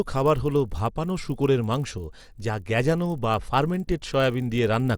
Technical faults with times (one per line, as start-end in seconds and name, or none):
0.00-4.97 resampler restarted on every block